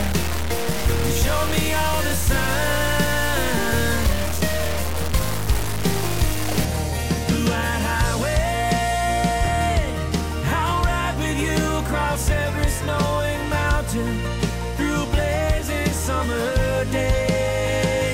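From the start to about 6.65 s there's low bit depth without dither: a gritty, grainy distortion that rides right along with the sound, sitting only around 10 dB under it. That's likely truncation down to something like 3 bits, with anything quieter than one step dropping to silence or sputtering between steps.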